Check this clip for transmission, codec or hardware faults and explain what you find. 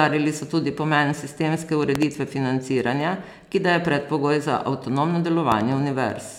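Two hardware faults here, both a loud pop. Around 1.95 to 2.05 s and again around 5.52 to 5.63 s there's a sharp double pop well above the speech, which carries on underneath. The likely cause is a voltage step from a plug, switch or static that the downstream circuitry shaped into twin thumps.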